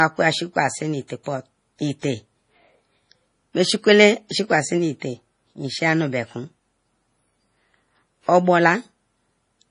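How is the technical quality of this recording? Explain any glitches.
The technical quality is poor: heavy coding damage runs through the whole clip, with four audible pre-echoes.

Throughout, nothing is present above 10.5 kHz, and the sound is watery and swirly. This is likely MP3 compression at a low bitrate, around 32 kbps. On a spectrogram it shows as a hard ceiling with speckled, flickering gaps.

Pre-echo occurs at 1.08–1.10 s, 1.24–1.26 s, 2.00–2.03 s and 4.29 s, spreading 17 to 31 ms. Block-spread quantisation noise leaks ahead of the attacks, so a short hiss precedes each onset, which shows as a smeared waveform edge.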